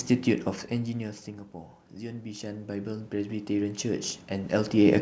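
A speech recording showing automatic gain rising from 1.95 s to the end. After the input level drops by about 16 dB, the gain control slowly raises its gain, so voice and room noise swell together over several seconds. The level changes near half a second and again around 4.5 s sound like the talker moving relative to the microphone. The bandwidth stops at 8 kHz, which fits a G.722 call path.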